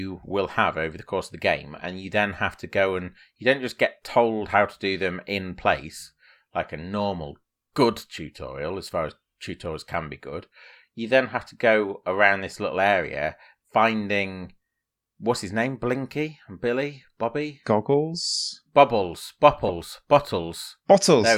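No faults are audible anywhere in this recording.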